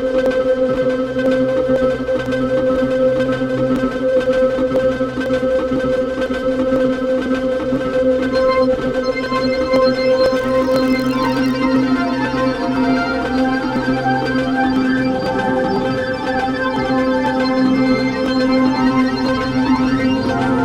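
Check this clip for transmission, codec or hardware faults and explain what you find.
One fault is present: a block size mismatch (padded) from 10.35 to 11.56 s. One stage hands over blocks slightly shorter than the next stage reads, and the shortfall in each block is filled with zeros. Every block therefore carries a tiny silent gap, and the repeating dropouts form a buzz at about 43.1 Hz, which fits a 1024-sample read. The sound keeps its pitch and runs only marginally slow, at 0.999 times normal speed.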